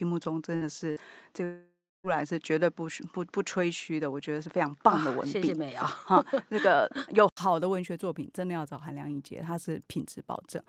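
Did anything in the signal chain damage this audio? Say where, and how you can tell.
Yes. Input switched to a poorer device, from the start to 7.37 s: the first stretch is duller, with nothing above 7.6 kHz, a level about 5 dB different, and a faint new noise floor. An 80 ms silence at 7.37 s, where fuller sound returns, points to a likely input-device change at the driver stage.

Burst of packet loss at 0.55 s and 0.91 s, each lasting about 85 ms: the receiver stretches the last sound for roughly 54 ms as a fading buzz or hiss, then resumes with about 60 ms of audio skipped. This is a network-stage loss concealed by the call path's jitter buffer.

Long network dropout from 1.44 s to 2.07 s: concealment smears the last sound into a fading tail, leaving about 260 ms of silence before the audio resumes. Roughly 600 ms never arrives, which fits a likely network outage rather than a local recording fault.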